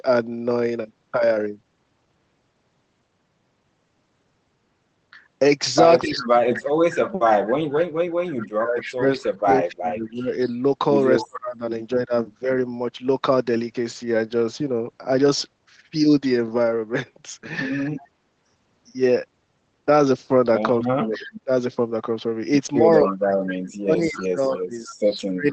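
At 6.02 to 6.07 s, and again at 8.80 to 9.36 s, a faint repeat of the speech trails the original by 256 ms at about 15 dB below it. This is echo leak, most likely a loudspeaker on one side whose echo canceller let part of its microphone pickup return down the line. The fixed quarter-second lag and the fact that this is a copy added on top, rather than a loss, separate it from suppression.

From 6.05 to 12.49 s the main speech dips in patches adding up to about 4 s, at worst by around 35 dB. This is speech suppressed in double talk: with both sides active, the canceller likely could not tell the talker from the returning echo and turned down everything. The speech is lost, not doubled.

A quieter echo leak at 17.98 to 18.08 s sits about 30 dB down.

From 20.79 s to the end, double-talk suppression returns, with drops up to roughly 30 dB. Echo leaks overlap it at 21.14 to 21.40 s (about 20 dB down) and 23.05 to 24.95 s, the strongest at about 10 dB down, all at the same 256 ms delay. 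The band-limited call sound, topping out near 8 kHz, fits an Opus call path.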